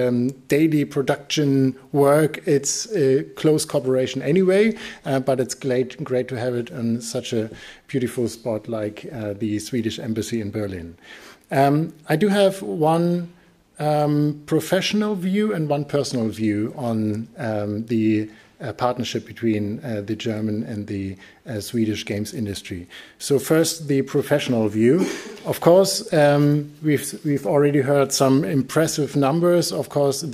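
There are no technical faults to describe in time order in this audio.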